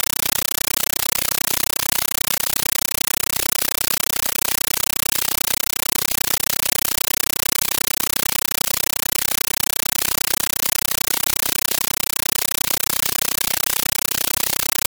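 Compressed stream played as audio, throughout: an undecoded AC-3 bitstream treated as samples gives chattering 9.33 ms noise bursts, 31.25 per second, replacing the speech.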